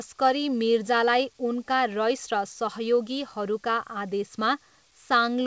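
No technical faults are audible.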